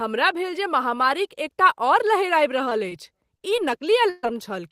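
At 2.69–2.73 s and again at 2.89–2.93 s there is short concealed packet loss: about 20 ms of audio failed to arrive each time, and the receiver bridged it by extending the preceding sound. Each sounds like a brief smear or wobble rather than silence, which separates it from a plain dropout.

From 3.37 to 4.32 s, repeated packet loss (robotic sound) sets in. Four gaps, the longest 132 ms, are each patched by continuing the last sound, covering about a fifth of that stretch. The recurring patches give a choppy texture with pieces missing, unlike the isolated smears earlier.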